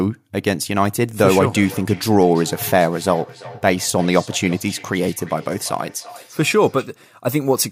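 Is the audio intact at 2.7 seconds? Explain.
No. At 2.7 seconds the speech carries a feedback echo between two devices, running from 1.22 to 6.93 s. Two devices in one room share the call. Each echo canceller ignores the other device's playback. Speech returns about every third of a second, about 20 dB below the speech.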